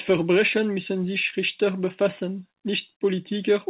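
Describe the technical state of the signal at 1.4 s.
At 1.4 s the signal is just leaving a short concealed packet loss, spanning 1.30 to 1.39 s. About 20 ms of audio arrived too late and was filled by extending the preceding sound before crossfading back, leaving a brief smear or wobble.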